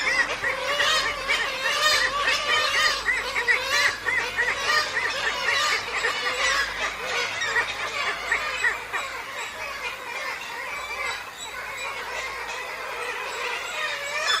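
From start to end, DECT cordless phone buzz is present. Nearby radio bursts every 10 ms get rectified, giving a thin, steady 100 Hz buzz well below the sound.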